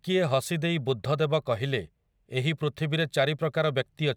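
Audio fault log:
No audible faults found.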